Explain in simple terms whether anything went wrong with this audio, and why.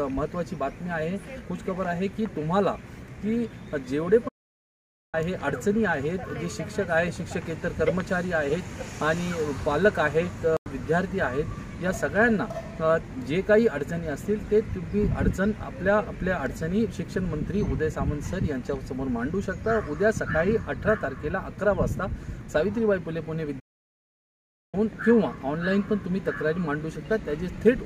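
Twice the sound simply stops and then picks up again: from 4.28 to 5.15 s (almost a second) and from 23.59 to 24.75 s (just over a second). These are playback stalls, likely caused by the player running short of data or being held up. They are long pauses, which sets them apart from the much shorter hole below.

At 10.57 s there is a corrupt frame muted: one damaged chunk of the file was rejected, and silence filled its place for about a tenth of a second. The gap starts abruptly, is far briefer than a stall, and the timing afterwards stays on track.

At 13.97 s a corrupt FLAC frame gives a glitch lasting only a few thousandths of a second. Here the damaged chunk was decoded instead of rejected, so you hear a sudden disturbance rather than silence. The sound is clean again straight after.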